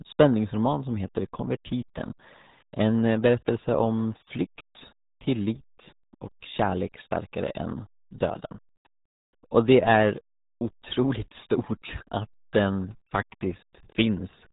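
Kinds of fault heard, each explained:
RealAudio 14.4 codec: the speech runs through RealAudio 1, the old dial-up modem codec, and it's badly mangled. Nothing gets through above 3.8 kHz, so everything's muffled, and the coarse coding leaves a gargly, smeared texture that fits an 8 kbit/s stream.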